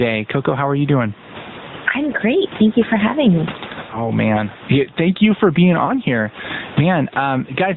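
Gain pumping runs through the whole clip: the background swells in each pause and ducks by roughly 20 dB under every loud syllable, squashing loud and soft passages together. The likely cause is input gain set far too high, with a fast limiter or compressor repeatedly pulling it down. The faint room noise, about 32 dB below the speech, rises and falls with each swing.

The AMR narrowband mobile codec also shapes the entire clip. Nothing passes above 4 kHz, so the speech is muffled and thin, and the coarse pulse-driven vocal-tract model makes it plainly buzzy and synthetic. The degree of damage fits a mid-rate mode around 10.2 kbps.

At 3.90 to 4.12 s and again at 5.86 to 5.94 s there are lost AMR speech frames. The decoder fills each gap by repeating the last good pitch and vocal-tract settings at reduced gain, giving a brief warbling dip before the speech returns slightly rough. Each event fits a single lost 20 ms frame.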